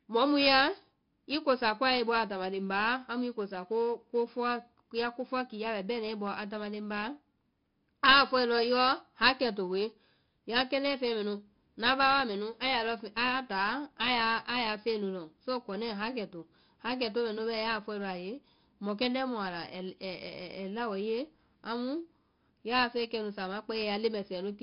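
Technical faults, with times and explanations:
Throughout, 4-bit ADPCM compression: each sample is coded as a coarse 4-bit step from a predicted value, so a gritty hiss rides on every loud syllable and consonant attacks distort heavily. Nothing is heard above 5.3 kHz, which suggests a sample rate near 11 kHz.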